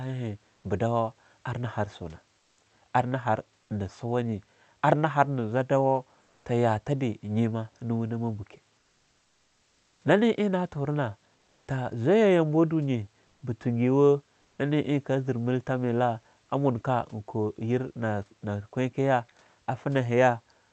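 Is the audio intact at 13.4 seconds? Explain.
No. From 13.27 to 13.41 s, comfort noise replaces the room background with a steady, featureless hiss about 1 dB off. Discontinuous transmission is the likely cause.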